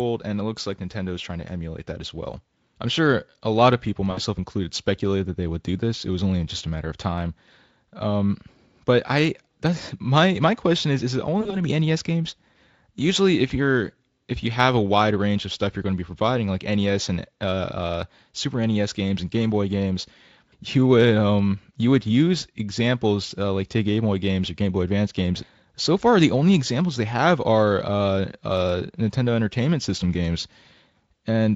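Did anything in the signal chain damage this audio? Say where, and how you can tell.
Yes. VoIP packet loss concealed by the speech codec, in the network stage, at 4.11–4.20 s after "a lot of people" and 11.41–11.57 s before "to be". The decoder extrapolates the last frame into a buzzy tone or coloured noise that fades.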